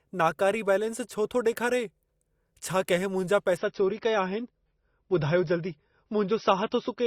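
At 3.57 s, just after "छा कहिं मुंहिंजा", the player switches to a lower-bitrate version of the adaptive stream, presumably because the connection slowed, and stays there to the end. The switch is abrupt but leaves no gap. From that point the speech loses everything above 6 kHz, so sibilants and breath turn dull, and coding artefacts become audible. The sound fits a step down from roughly 128 kbit/s MP3 to about 24 kbit/s.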